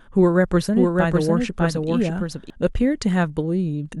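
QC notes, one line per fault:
0.74–2.50 s, doubled audio track: a second, full-band copy of the speech trails the original by about 0.7 s at roughly 5 dB lower, dry and without decay, switching in and out abruptly; likely a slower second capture path mixed in.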